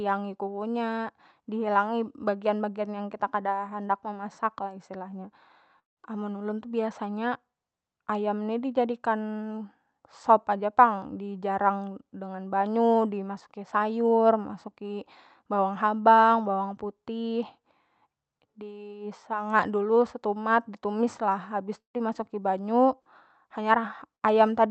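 At 5.12 s a lost packet rebuilt from error correction replaces 60 ms with a low-bitrate copy carried in the next packet. Nothing is missing, so there is no gap or fade. The passage simply turns briefly rougher and noisier, which separates it from true loss.

From 5.79 to 6.00 s the last sound stretches on and fades, then drops to near silence. About 0.18 s of speech never plays before the audio resumes further on. Fading all the way to silence points to a long network dropout as the likely cause, rather than a short burst.

At 12.93 s the same error-correction repair recurs: 60 ms sounds grainier but keeps running without interruption.

From 21.80 to 21.97 s a burst of packet loss removes about 120 ms. The receiver carries the last sound forward and turns it down across the gap, then jumps ahead. Like the dropout, the fill goes almost entirely silent, for about 130 ms.

Error-correction repairs follow at 21.94, 22.18, 22.42 and 23.02 s, each a 60 ms stretch of coarser, hissier sound with no gap.

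At 24.16 s a second, shorter burst loses about 60 ms, bridged by a brief 50 ms fading fill.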